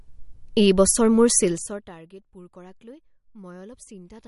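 Throughout the clip the speech has a watery, swirling texture, and nothing is present above 11.2 kHz. The damage is plainly audible. This is likely MP3 compression at a low bitrate, around 49 kbps. Short of bits, the encoder drops weaker frequency components, which then flicker in and out between frames and produce the swirl. The fixed treble cutoff takes away the top of the spectrum, so consonant detail and sibilance lose their air.

From 1.39 s to 1.98 s, just after "এই বছৰ মোৰ", the level falls by roughly 25 dB, and a ticking zipper noise rides on the sound as it drops. The gain moves in unsmoothed 2 dB steps at around 30 steps a second instead of gliding. Each abrupt jump puts a small discontinuity into the waveform, and the rapid sequence of these clicks is heard as a zipping texture over the fade.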